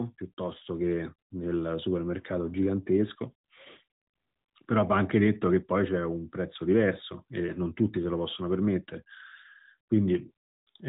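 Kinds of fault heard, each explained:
No kinds of fault are heard in this speech clip.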